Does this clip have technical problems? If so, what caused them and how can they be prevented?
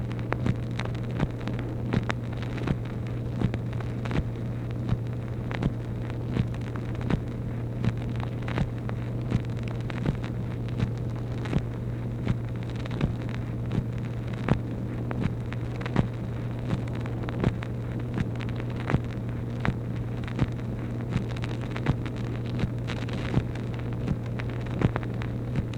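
No, no technical problems found.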